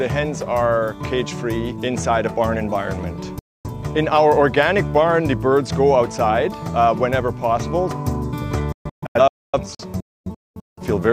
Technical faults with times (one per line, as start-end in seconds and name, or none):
3.39-3.70 digital broadcast dropout
8.72-10.82 digital broadcast dropout